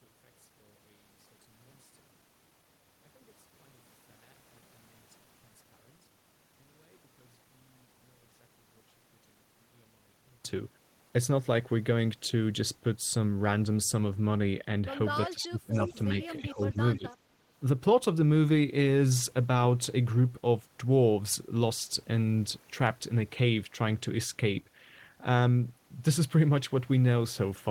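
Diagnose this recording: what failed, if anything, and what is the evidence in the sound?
Speech suppressed in double talk, at the call-processing stage: the speech dips sharply from 15.31 to 15.97 s, by roughly 25 dB at its deepest, then by about 10 dB from 16.27 to 16.8 s and 16.97 to 17.05 s. The waveform shows notched envelope gaps, and the spectrogram shows the upper bands thinning. The likely cause is an echo canceller ducking its own talker while the far end spoke.

Echo leak, also in call processing: a faint copy of the speech trails it by 321 ms, at about 15 dB below the speech from 15.74 to 16.03 s and at about 40 dB below from 17.11 to 17.15 s. On a spectrogram it appears as shifted ghost harmonics, likely residual loudspeaker pickup that the canceller missed.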